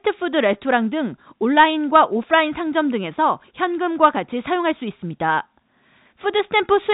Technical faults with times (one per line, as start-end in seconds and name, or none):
none